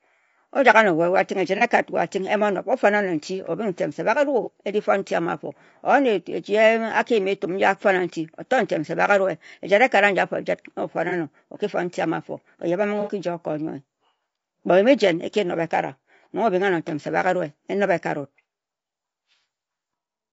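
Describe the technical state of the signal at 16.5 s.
Low-delay AAC compression is present at 16.5 s, as it is across the whole clip, likely from AAC-ELD. Its short frames resolve pitch harmonics poorly, and at a low bitrate near 32 kbps the speech sounds plainly rough and grainy, with noise filling between harmonics.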